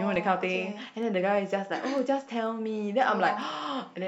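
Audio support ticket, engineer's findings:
Word clock ticks in the speech, 0.55 to 3.90 s: about seven sharp ticks, roughly every half second. The receiving device is free-running, not locked to the sender's clock, so each slip drops or repeats a single sample. The rate points to clocks about 40 ppm apart.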